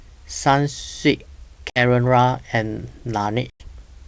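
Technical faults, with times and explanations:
1.70–1.83 s and 3.50–3.68 s, packet loss on an ADPCM call: sharp silent gaps of 60 ms and 100 ms, each followed by a brief, slightly distorted recovery. Several packets were lost, so the receiver's adaptive predictor and step size drifted from the sender's until they resynchronised.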